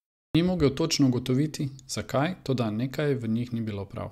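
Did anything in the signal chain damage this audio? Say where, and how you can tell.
Yes: a clipped start after a pause at 0.31 s, at playback. The output device woke late and lost 37 ms. The waveform leaps from flatline with no onset.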